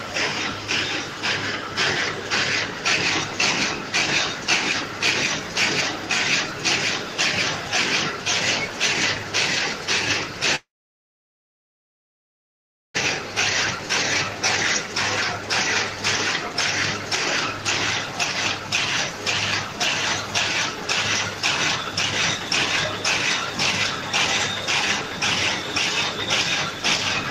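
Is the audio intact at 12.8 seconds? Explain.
No. Between 10.55 and 13.02 s a long network dropout likely interrupted delivery, so 12.8 s falls inside it. With no audio arriving, the receiver briefly stretched the last sound into a fading buzz, then left about 2.3 s of silence. When audio returns after 13.02 s, about 1.6 s of the original is simply gone, and the playback timing has shifted by roughly 0.7 s.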